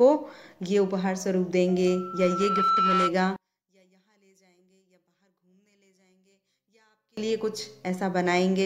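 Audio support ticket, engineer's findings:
Loudspeaker feedback squeal, 1.86 to 3.13 s. A single 1.3 kHz tone swells over under a second and ends a few dB above the program. Mic is hearing its own speaker. Loop gain exceeds one at that frequency.

Sound drops by about 39 dB, 3.36 to 7.17 s. Only a faint residue remains. Likely one channel inverted: reversed polarity on one side cancels the shared content when summed to mono. Check channel wiring and polarity settings.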